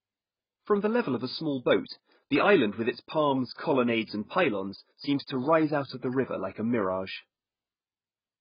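Speech runs the whole clip through a dull, band-limited filter with nothing above 5.1 kHz, so sibilants lose their edge and turn fizzy, and sustained vowels warble and smear. The damage is heavy and constant from start to finish. The likely cause is AAC compression (AAC-LC) at a very low bitrate, which fits a rate of around 12 kbps: the encoder lowered its cut-off and starved the remaining bands, leaving swirling artefacts.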